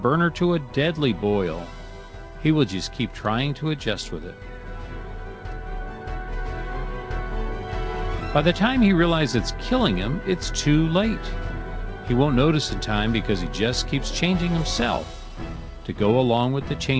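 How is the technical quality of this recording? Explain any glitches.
No glitches or faults heard.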